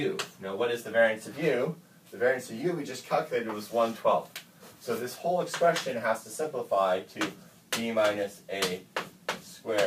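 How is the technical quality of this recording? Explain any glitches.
The recording has one clear glitch. From 6.62 s to the end, crude rate conversion sets in: samples were repeated or dropped by nearest-neighbour picking, with no filtering, which fits a jump from 44.1 kHz to 48 kHz. The stepping error recurs in a fixed pattern and sits only about 25 dB below the signal, producing a gritty, inharmonic fizz that tracks loud and bright passages. Unlike clipping distortion, it adds tones unrelated to the sound, even at moderate levels.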